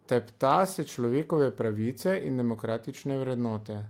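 From 0.48 s to 3.11 s, a call bitrate drop pushes the codec from 64 to 27 kbps. It bottoms out for about 1.6 s, and the speech turns coarse and rough.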